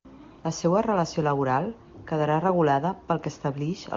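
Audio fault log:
No faults are heard in this speech clip. It has the bright, clear character of AMR wideband (HD Voice) coding at its highest rate, consistent with 23.85 kbit/s, and any trace of the codec is faint at most.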